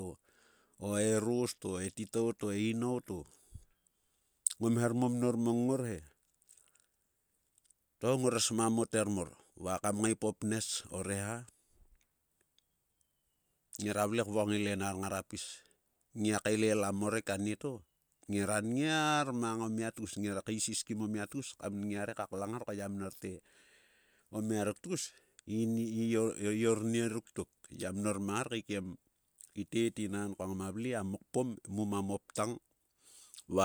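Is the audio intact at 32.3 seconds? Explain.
Yes, at 32.3 seconds the audio is intact, with no fault audible at that moment.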